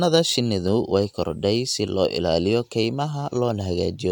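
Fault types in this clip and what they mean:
Listening through the speech recording, nothing stood out as a technical problem.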